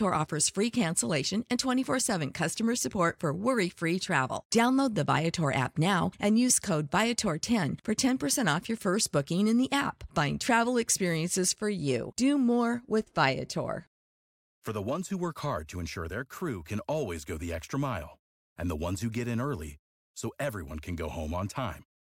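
No technical faults can be heard in the speech at any point.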